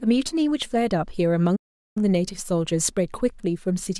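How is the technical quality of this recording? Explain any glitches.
The speech carries one clear glitch, a playback stall, from 1.56 s to 1.97 s. The audio drops to silence mid-flow for about 0.40 s and then resumes. This is likely the player starving for data or having its output thread blocked, so nothing reached the output until the buffer was refilled or the thread was released. It sounds like an abrupt cut to dead silence rather than a fade, followed by an equally sudden restart.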